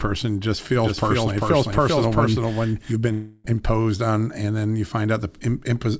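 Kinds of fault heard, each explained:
Doubled audio track: from about 0.84 to 2.92 s a second full-band copy of the speech runs roughly 400 ms behind, around 5 dB quieter, with no room colour, and it cuts in and out abruptly, likely from a second slower capture path or a misaligned edit.
Long network dropout: from 3.12 to 3.46 s about 320 ms of audio never arrives, so the receiver stretches the last sound into a fading buzz for the whole gap, likely a network stall, then speech resumes at "imposed on and then" with that piece gone.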